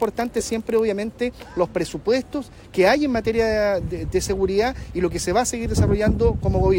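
From the start to 0.80 s there is a block size mismatch (padded). One stage hands over blocks slightly shorter than the next stage reads, and the shortfall is filled with silence. This produces a buzz at 43.1 Hz, which fits a 1024-sample read block. Playback runs at 0.999 times normal speed, so each inserted gap is tiny. On a waveform, brief dropouts recur every 23 ms. A spectrogram shows evenly spaced vertical striations and a harmonic comb at 43.1 Hz multiples.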